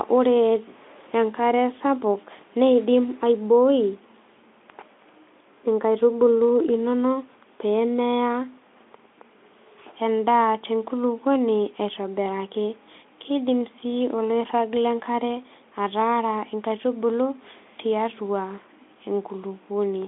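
No faults found; the speech sits in a telephone-style band of 250 Hz to 3.5 kHz, which fits a Speex link at a fairly generous setting, and nothing further needs flagging.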